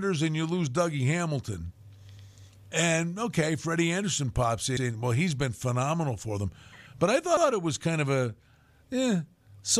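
At 2.17, 4.77 and 7.37 s the speech stutters: overlapping chunks, each 2.5 s block starting 100 ms before the previous one ended, so that slice plays twice. Unlike a dropout, nothing goes missing. The same sound simply repeats at a steady interval.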